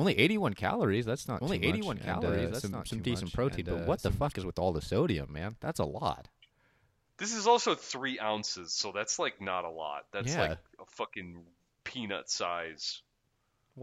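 Speech clip with a doubled audio track from the start to 4.32 s: a second copy trails about one and a half seconds behind, roughly 5 dB quieter, dry, and cutting off abruptly. Likely a slower second capture path or an out-of-step edit.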